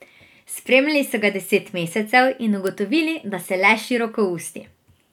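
Three sharp, broadband ticks cut through the speech: at 0.73 s just before "so ga deset", at 1.88 s right after it, and loudest at 2.67 s, peaking near -17, -23 and -5 dBFS. Each is a bit error spike, a single sample knocked off by one flipped bit.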